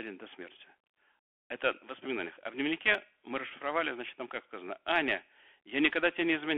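The whole clip carries the sound of a Bluetooth CVSD headset codec. Speech sits in a narrow telephone band, roughly 300 Hz to 3.4 kHz. The lows are thin and the top is gone. The damage is plainly audible. A one-bit coder steps the waveform up or down, with an adaptive step size, at a rate that fits 64 kbps. Fast, loud rises outrun the step. The s sounds turn scratchy, and a granular hiss runs under the speech.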